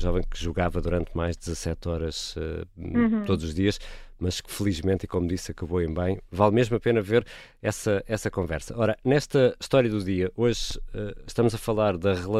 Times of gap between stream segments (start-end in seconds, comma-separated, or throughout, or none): 10.71